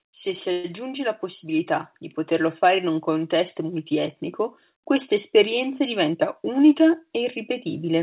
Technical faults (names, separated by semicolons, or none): automatic gain rising; call audio freeze; jitter buffer speed-up